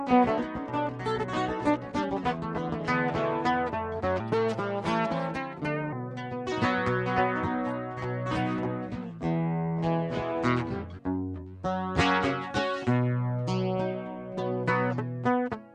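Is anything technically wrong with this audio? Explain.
Yes. From 4.2 to 5.93 s, a section plays at the wrong speed, 1.21 times too fast, likely from a mismatched playback clock. Pitch rises about three semitones, and the sound turns high and hurried.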